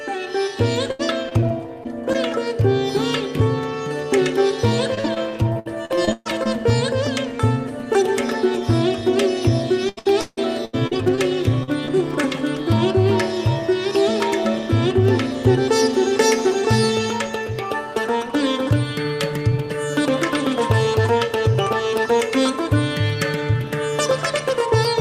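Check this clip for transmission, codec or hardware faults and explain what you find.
Transmission faults are present: three stretches of repeated packet loss and two short concealed packet losses right after the last of them.

Repeated packet loss (robotic sound) appears at 0.91–2.16 s, 4.95–6.47 s and 9.89–11.19 s. The audio turns choppy, with pieces missing. Packets kept arriving lost or late, and each hole was patched by extending the previous sound. About 12%, 25% and 34% of each stretch is filled in, with the longest single gaps of roughly 76, 125 and 159 ms.

Short concealed packet loss occurs at 11.63–11.69 s and again at 11.85–11.89 s. Each is a brief smear or wobble. About 40 ms and 20 ms of audio never reached the decoder in time. The receiver bridged each hole by continuing the last sound, then blended back into the real signal.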